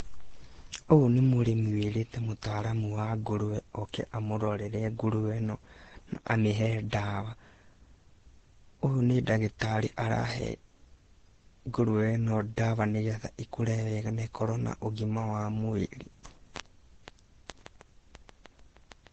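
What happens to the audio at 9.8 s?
At 9.8 s, as throughout, the speech carries the mixed artefacts of two codecs heard together, with nothing above 14 kHz, likely from transcoding between lossy codecs: a Vorbis encode re-encoded at low bitrate into Opus.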